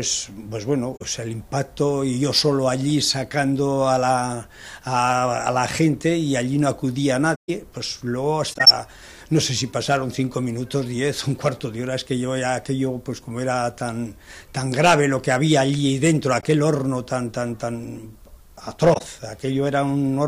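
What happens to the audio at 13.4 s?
Nothing goes wrong at 13.4 s; the audio plays through that moment intact, with no dropout, click or other fault.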